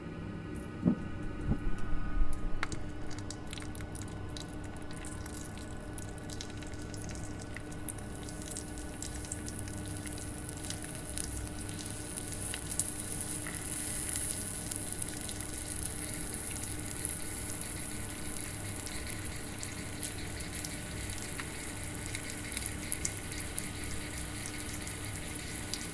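Nothing in the audio stood out as a technical problem on listening.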